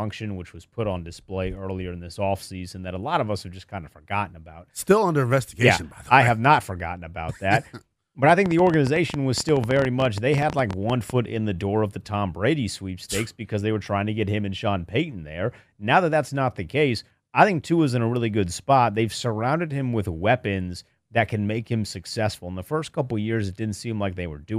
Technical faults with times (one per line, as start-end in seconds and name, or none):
8.29-11.11 train of clicks